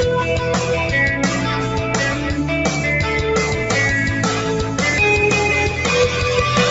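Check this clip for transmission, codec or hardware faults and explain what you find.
A speech-tuned noise suppressor stayed active on non-speech audio for the whole clip. It treats steady tones, ambience and decay tails as noise and pulls them down by roughly 5 dB, while onsets mostly pass, so sustained sound pumps and thins between attacks. The band stops at 8 kHz, as the call path delivers it.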